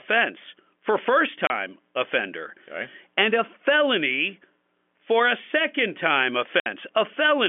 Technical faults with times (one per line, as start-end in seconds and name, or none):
1.47-1.50 packet loss filled with silence
6.60-6.66 packet loss filled with silence